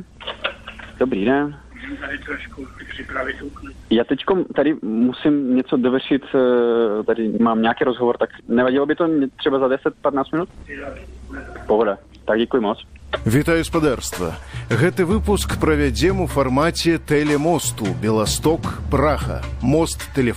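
Damaged data in a compressed stream breaks through three times: from 8.38 to 8.41 s, at 10.87 s, and from 13.14 to 13.17 s, each lasting only a few hundredths of a second. At each point part of the encoded data arrived wrong, so the decoder misread or rejected those frames, lost its sync and had to hunt for the next valid frame header. The result is a brief disruption in the sound, such as a chirp, squawk, click or short gap, before decoding resumes.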